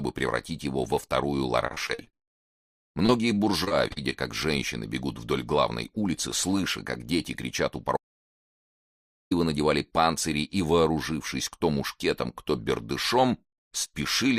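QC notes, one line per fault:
1.67–4.14 s, repeated packet loss (robotic sound): a quick run of short holes, the longest about 52 ms, each patched by stretching the last bit of sound. Roughly a fifth of the stretch is filled in, so it turns choppy.
7.97–9.31 s, audio dropout to silence: the sound cuts out to silence for about 1.35 s, with no room tone underneath, then comes back mid-flow. Likely the input link or device dropped while recording carried on writing silence.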